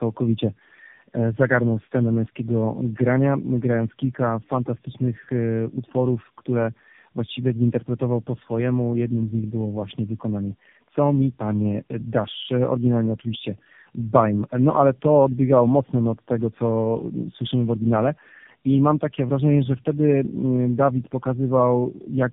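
Speech with tandem speech coding throughout: rough, muffled, warbly, nothing above 3.7 kHz, which points to three AMR-NB passes in a row, each re-coding the last's damage.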